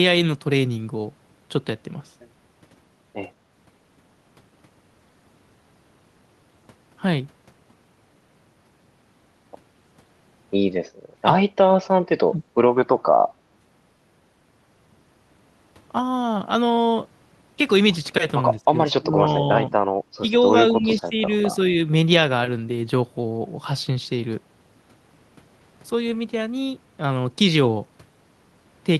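The speech keeps ducking in short bites, first at 11.58–11.64 s and 12.29–12.42 s, then in a cluster at 18.56–18.78, 18.95–19.24, 19.7–19.9, 20.2–20.35 and 20.69–21.15 s. The level falls by roughly 15 to 25 dB each time, for as little as a few tens of milliseconds up to about half a second. This looks like speech suppressed in double talk. Both ends were likely talking at once, and the echo canceller clamped down on the near talker along with the echo.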